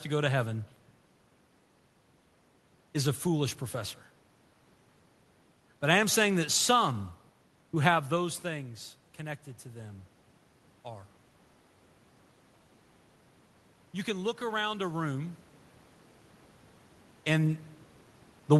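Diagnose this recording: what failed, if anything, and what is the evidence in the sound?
Automatic gain rising, in call processing: from 13.94 s to 15.43 s, speech and room noise swell together by about 3 dB. The waveform envelope ramps up smoothly and the spectrogram's noise floor brightens as the gain control lifts an input it judged too quiet.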